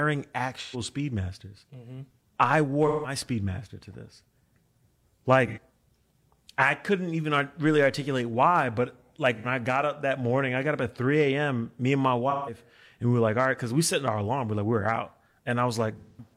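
AAC frame loss with concealment breaks this speech at 0.61–0.80, 2.87–3.15, 5.47–5.59, 9.36–9.47, 12.30–12.58 and 15.97–16.33 s: the decoder patches missing frames from earlier spectrum, leaving smeared, noisy gaps.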